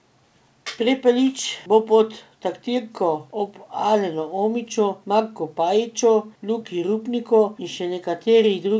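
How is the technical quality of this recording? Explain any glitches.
No glitches: the speech comes over a wideband call link whose top end stops at 8 kHz, consistent with G.722, and nothing faulty is audible on it.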